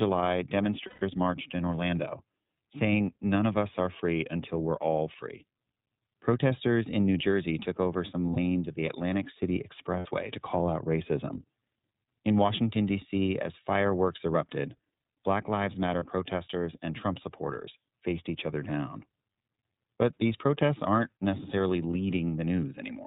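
Speech coded throughout with the iLBC codec: nothing above 4 kHz survives, and the plainly audible rough, slightly synthetic grain, rather than the clean dullness of a simple band-limit, points to its 13.33 kbps mode with 30 ms frames. Lost iLBC frames appear at 0.87 to 1.02 s (about 150 ms), 8.34 s, 9.99 to 10.06 s and 15.99 to 16.05 s. Each gap is a held, buzzy-breathy vowel, and the sound recovers at once instead of smearing into the following frames.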